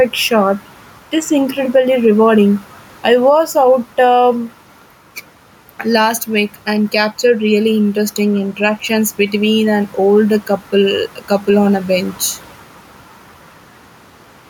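Speech with gain pumping throughout. The room noise sits about 36 dB below the voice. The level swings by something like 5 dB, and loud and quiet passages sit squashed close together. The likely cause is input gain set far too high, with a fast limiter or compressor clamping down on every loud syllable.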